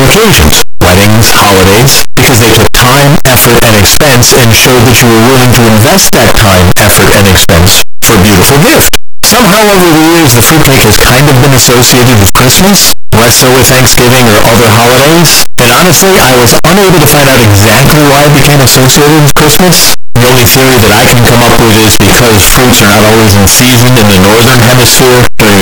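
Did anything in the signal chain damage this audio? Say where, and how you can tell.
Yes, at the sample-format conversion stage: across the whole speech clip, soft sounds blast as loud as the talking, all harsh, buzzy distortion. That's the signature of signed and unsigned mixed up, likely on 8-bit samples, so every zero crossing slams across the full range rather than sitting near silence.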